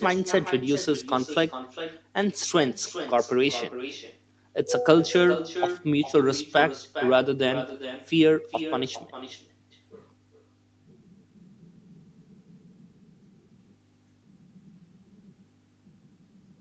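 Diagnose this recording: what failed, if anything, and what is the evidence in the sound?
Echo with no canceller at the far end: loudspeaker sound re-enters the microphone, so the talker's speech returns roughly 0.4 s later, about 12 dB down and thinner.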